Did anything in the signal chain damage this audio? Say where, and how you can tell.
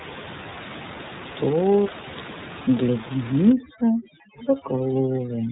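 Yes. Throughout, the speech is dull and slightly rough and synthetic, with nothing above about 3.8 kHz. That is the iLBC codec at the codec stage: it codes each frame's excitation independently, and the texture fits 30 ms frames at about 13.33 kbps.

From 3.52 s to the end, the room noise, about 13 dB below the speech before that point, drops and breaks up into twinkling specks. This is overdone noise removal in call processing, cutting bands near its noise estimate along with quiet speech detail.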